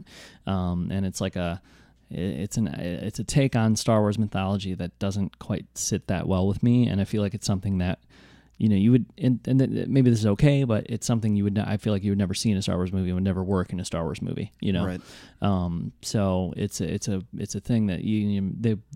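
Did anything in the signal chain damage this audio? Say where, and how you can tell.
No, nothing I can hear points to damage at any stage of the chain.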